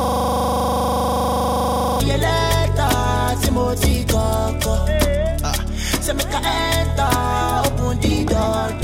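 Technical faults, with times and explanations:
0.00–2.00 s, system hang loop: a 25 Hz buzz from the start, as one 40 ms slice repeats exactly while the frozen system leaves the hardware cycling its buffer.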